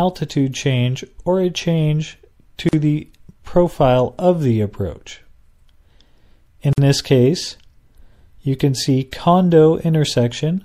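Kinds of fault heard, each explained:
MP3 compression: plainly audible codec damage, likely from about 64 kbps encoding, giving watery, swirly treble and smeared attacks as weak frequency lines drop in and out.
Gap at a join of encoded pieces: silences at 2.69 s (about 42 ms) and 6.73 s (49 ms), four seconds apart, where separately encoded pieces meet untrimmed, leaving encoder padding.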